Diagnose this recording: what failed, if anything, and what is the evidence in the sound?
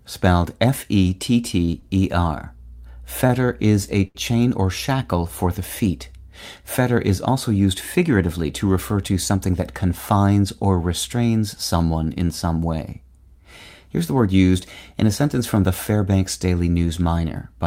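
The network path into the receiver's jitter buffer failed first, as short stalls from late packets at 1.65–1.70 s, 1.80–1.84 s, 3.27–3.31 s (just before "is a") and 4.07–4.17 s (between "is a" and "or shackle for the"). The buffer ran dry, so the last sound was stretched by 22–24 ms, and by 74 ms in the final one, then resumed where it left off. Unlike packet-loss concealment, nothing is skipped. Sounds are only held too long.

Later the same jitter buffer over-corrected with a jitter buffer speed-up from 9.08 to 9.60 s, between "used figuratively to refer" and "confines or restrains someone". With excess audio queued, the receiver trimmed pitch-period-sized pieces repeatedly, removing about 70 ms and running the passage at 110% speed. The pitch stays put, which separates this from a resampling or clock error, where pitch and speed would rise together. The speech simply sounds hurried.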